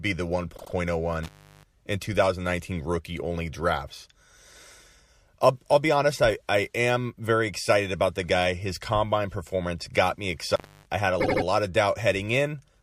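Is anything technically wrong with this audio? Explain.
Yes, the speech has two kinds of fault.

Repeated frames occur at 0.56–0.72 s and 11.20–11.43 s, between "I had a" and "lot of". A 78.4 ms block, which fits a run of three compressed frames, was decoded again: twice more at the first point, adding about 157 ms, and three times more at the second, adding about 235 ms. Each replay sounds like a stutter. On a waveform the identical segments repeat side by side. On a spectrogram the same pattern is copied.

Intermittent contact occurs at 1.23–1.64 s, where the line is open for about 355 ms, and at 10.52–10.86 s, open for about 272 ms, between "combine performance got me" and "I had a lot". A loose connection briefly breaks, so the sound drops out with crackle at both edges and only faint hiss in the gap. The waveform shows a near-flat gap bounded by spiky bursts. The spectrogram shows a dark band framed by broadband streaks.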